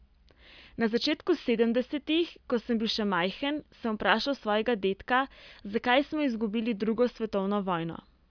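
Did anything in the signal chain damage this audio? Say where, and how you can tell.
No, nothing in this speech recording stood out as damaged on listening.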